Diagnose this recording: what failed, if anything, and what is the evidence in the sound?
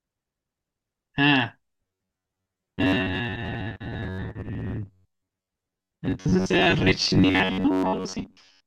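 The driver or buffer stage failed. From 1.73 s to the end, the speech becomes robotic, with a rigid metallic buzz at 93.8 Hz. The likely cause is underruns, where roughly half the audio is replaced by repeats of a 10.7 ms buffer, so the repeat period sets that pitch.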